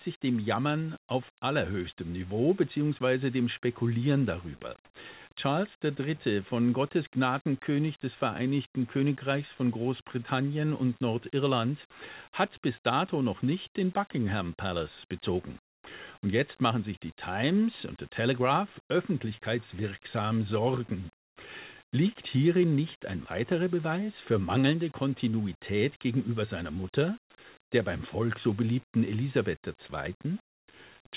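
From 4.85 to 4.94 s, roughly 90 ms of the background turns into a smoother synthetic hiss, with its level shifting by about 9 dB. That's comfort noise in place of the background, likely the sender's voice detector pausing transmission while the receiver fills in.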